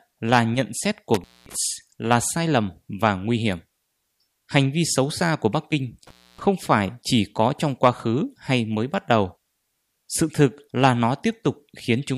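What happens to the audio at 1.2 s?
An intermittent contact, a loose cable or plug briefly opening, hits the speech between 1.14 and 1.56 s, cutting it out for about 224 ms with crackle at the edges and faint hiss.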